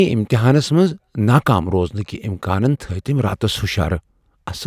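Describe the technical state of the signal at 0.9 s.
At 0.9 s the signal is intact, with no dropout, clipping, glitch or other fault present at that moment.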